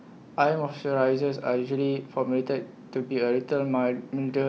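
No technical faults are audible anywhere in the speech recording.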